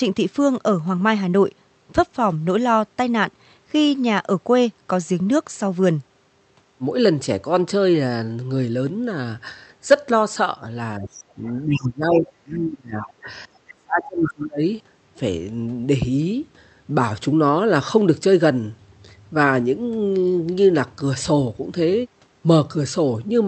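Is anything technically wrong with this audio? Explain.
Yes. From 10.98 to 11.47 s and from 11.63 to 14.63 s, speech is suppressed in double talk, likely by an echo canceller ducking both talkers. It dips around 15 dB, then roughly 30 dB for three seconds. The waveform pinches.

The other side's voice leaks through at 11.13–11.24, 11.47–11.52 and 11.70–11.81 s. These are brief, faint scraps, loudest in the last, likely residual loudspeaker echo that escaped cancellation. On a spectrogram they form short, separate harmonic patches among the talker's.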